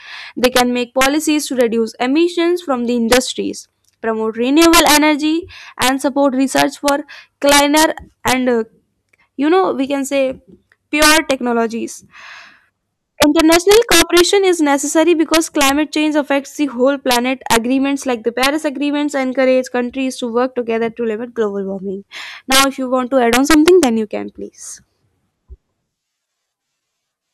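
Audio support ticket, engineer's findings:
Integer overflow, present throughout the speech. Symptom: violent cracks on the loudest syllables, far harsher than ordinary clipping. Mechanism: gain or summing stage drives peaks about 9 dB past full scale. Samples over the limit wrap to the opposite sign instead of saturating. Each wrap is a full-range jump. Extent: roughly half a percent of samples. Probable component: fixed-point mixer or gain stage lacking saturation logic.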